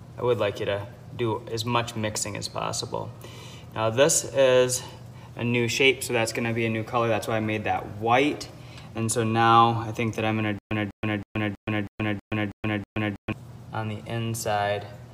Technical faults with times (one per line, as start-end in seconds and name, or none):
10.59-13.32 stutter with silent gaps